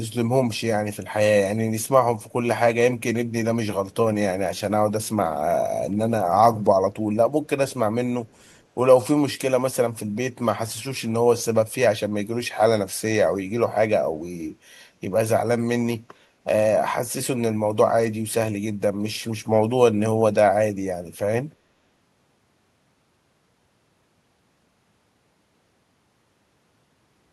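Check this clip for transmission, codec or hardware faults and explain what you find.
There's one fault here: an echo leak between 8.26 and 8.64 s. A delayed copy of the speech trails the original by about 319 ms, and it sits way down, roughly 40 dB below the voice. The likely cause is that the loudspeaker side's echo canceller missed part of what its microphone picked up and sent it back.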